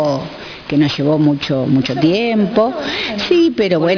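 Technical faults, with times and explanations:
Throughout, aliasing: content above the 5.5 kHz fold, left unfiltered when the rate dropped, which fits an 11 kHz target, reflects back as gritty, unrelated tones about 15 dB down.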